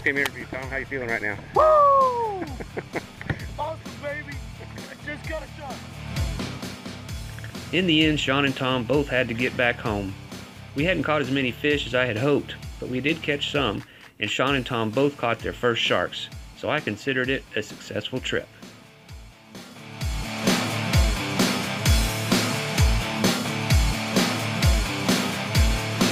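Nothing technically wrong can be heard anywhere in this audio.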